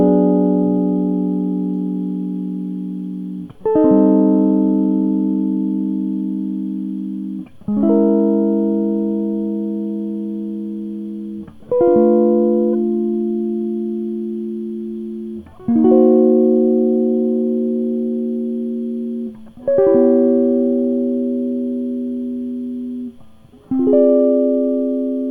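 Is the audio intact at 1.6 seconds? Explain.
Yes, the music plays through cleanly at 1.6 seconds, with no dropout, click or other fault at that point.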